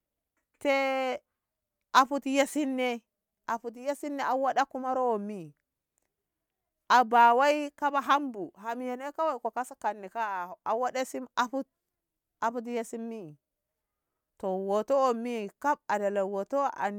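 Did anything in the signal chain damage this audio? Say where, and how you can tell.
No, nothing in this speech recording stood out on listening as damage introduced anywhere along the signal chain.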